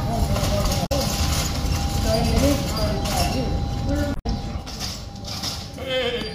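At 0.82 s and again at 4.12 s there's damaged data in the compressed stream, lasting about 0.09 s and 0.15 s. The decoder hits garbled frames, loses sync and hunts for the next header, so each spot comes out as a brief glitch.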